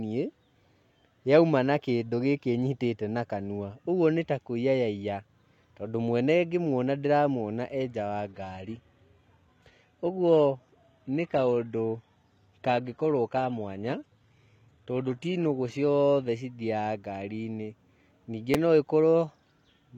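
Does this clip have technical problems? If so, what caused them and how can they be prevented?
Yes. Shortly after "nja wa", from 8.29 s to 16.29 s, the clip switches to an adaptive stream at a lower bitrate. The quality changes suddenly, with heavier codec artefacts and no gap. This fits a drop from roughly 96 kbit/s AAC to about 20 kbit/s HE-AAC. More client-side buffering and a steadier connection would prevent the downshift.

At 18.54 s a repeated buffer produces a brief click or buzz. A 5.8 ms block, consistent with a 256-sample buffer, plays twice with hard joins, and a few milliseconds of new audio are lost. A larger playback buffer or higher thread priority would prevent the underrun.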